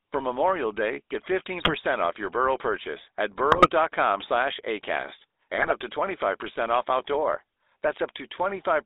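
The speech runs through the GSM full-rate codec, which rebuilds the voice from a vocal-tract filter and sparse pulses within a 300 Hz to 3.7 kHz band, fitting a 13 kbps stream, so everything sounds buzzy and gravelly. GSM bit errors on the link corrupt the decoder's filter, pitch and gain values, producing brief squawks and gargling at 1.58–1.71 s, 3.52–3.70 s and 5.58–5.73 s.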